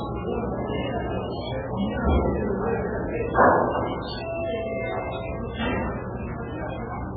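From start to finish, the encoder appears to have been starved of bits, most likely by MP3 compression at a very low rate, with damage consistent with something around 8 kbps. With so little to spend, it chopped off the treble entirely, leaving nothing above 4.6 kHz, and discarded weaker frequency lines, which flicker in and out between frames. The result is dull, heavily watery and swirly audio, with metallic chirping on bright detail and smeared attacks.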